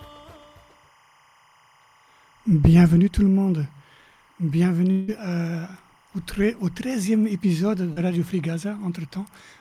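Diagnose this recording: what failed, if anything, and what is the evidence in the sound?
A faint, steady chirping warble sits behind the sound for the whole clip, about 35 dB below it, alternating between roughly 1 kHz and 2 kHz. This is timecode bleed in the analogue wiring: 25-frame linear timecode leaking from an adjacent track or cable.

From 4.91 s to 5.11 s the sound smears into a fading buzz rather than going silent, then resumes with about 0.16 s of material gone. This long network dropout is likely a stretch of packets that never arrived, papered over by the receiver extrapolating the last sound.

Between 7.93 s and 7.98 s there is a brief wobble where roughly 40 ms of audio is replaced by about 36 ms of synthesized continuation before blending back. This is short concealed packet loss at the network stage, patched by the decoder's concealment.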